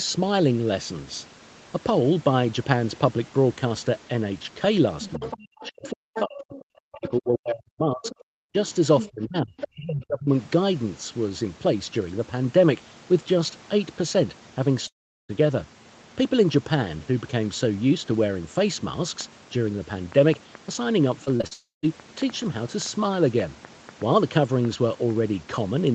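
From 5.0 to 6.59 s, and again at 6.93–7.11, 8.02–8.15, 9.0–9.11 and 9.59–9.68 s, the other side's voice leaks through. This is likely loudspeaker echo the canceller missed: a second talker about 15 dB under the speech, nearer 10 dB below in the later scraps.

Overlapping this, from 5.68 to 8.57 s and from 9.11 to 10.29 s, the speech is suppressed in double talk. The talker's own voice dips by as much as around 40 dB, and around 35 dB in the second span. This is not a gap in delivery: the level is likely pulled down only where the two voices coincide.

At 14.87–15.31 s a long network dropout leaves about 0.42 s missing. A fading concealment buzz gives way to silence, and the speech resumes with that part gone.

From 19.21 to 25.11 s a train of clicks runs, roughly twenty similar pops at an irregular 3.55 per second, peaking about 5 dB above the signal. They are audible in pauses too, which sets them apart from codec damage.

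Within that stretch, 21.25–21.53 s, repeated packet loss gives choppy, robotic sound. Four short holes, the longest 42 ms, leave about a third of the span patched.

Straight after, from 21.53 to 21.85 s, another long dropout likely from the network cuts about 0.3 s, ending in brief silence.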